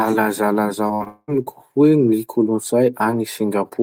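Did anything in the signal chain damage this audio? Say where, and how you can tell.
Yes. Repeated packet loss (robotic sound) runs from 0.87 to 1.30 s of this speech, a network-stage fault. Four separate holes open in quick succession, the longest about 197 ms. The receiver's concealment patched them by stretching out the last good sound, filling about 282 ms, around two thirds of that stretch. That is why the speech turns choppy there, with roughly 280 ms of real signal simply gone.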